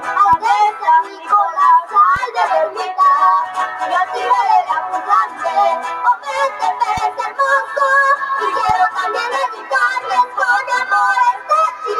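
A noise suppressor built for speech stays active across the whole clip, treating steady or decaying parts of the sound as noise to remove. Its gain keeps shifting as it decides what counts as noise, so the level swings by roughly 10 dB over the clip. Sudden onsets pass while sustained material is pulled down.

At seven points the suppressor cuts the sound harder than the rest, sinking level or cutting decays short: 1.04 to 1.30 s (down about 7 dB), 3.47 to 3.81 s (about 5 dB), 5.27 to 5.42 s (about 7 dB), 6.50 to 6.83 s (about 5 dB), 7.11 to 7.39 s (about 8 dB), 9.51 to 9.71 s (about 7 dB) and 11.33 to 11.50 s (about 8 dB). Each dip lasts a fraction of a second.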